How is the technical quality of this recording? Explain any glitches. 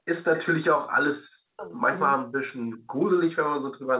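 The recording has three recurring echo-canceller faults, all heard within a narrowband call path that stops near 4 kHz, consistent with G.711 telephony.

Background gated by the echo canceller at 0.00–0.06 s, 2.82–3.02 s and 3.83–3.90 s: the canceller clamps the microphone while the loudspeaker plays, so room sound drops about 40 dB, then returns.

Echo leak at 0.16–0.46 s, 1.65–1.95 s and 2.67–2.76 s: a faint delayed copy of the far-end speech, 390 ms late at first and later 472 ms late, about 15, 20 and 30 dB below the speech. Its likely cause is residual loudspeaker echo escaping cancellation.

Speech suppressed in double talk between 1.49 and 2.54 s: the talker's speech drops by roughly 40 dB in pieces totalling around 0.7 s, likely because simultaneous talk made the canceller attenuate everything.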